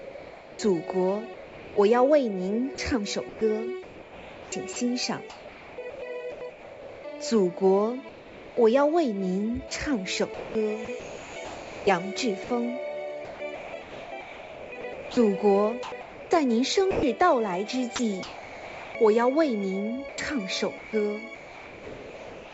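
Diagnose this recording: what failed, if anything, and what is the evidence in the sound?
In the call processing, discontinuous transmission likely stopped the sender during pauses, and the receiver filled them with comfort noise in place of the background. From 0 to 1.76 s and again from 8.09 to 8.57 s, the real ambience gives way to a smooth, featureless hiss. In the second stretch it sits about 3 dB lower than the background it replaces, which itself runs about 20 dB below the loud parts.

The sender's voice detector likely misread quiet sound as background, and this sound was dropped by the voice detector. From 1.34 to 1.76 s, roughly 0.21 s of genuine sound vanishes into steady synthetic noise before transmission resumes.

The same detector likely toggled repeatedly between sending and muting, so the sound is chopped by the voice detector from 2.75 to 7.04 s, from 10.34 to 17.03 s, from 17.96 to 18.95 s and from 20.09 s to the end. 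Soft edges are clipped away and replaced by synthetic noise. The audio carries nothing above 8 kHz, which fits a wideband call codec such as G.722.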